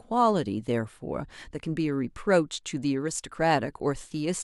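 No faults turn up anywhere in this bit of speech, so there's nothing here to pick apart.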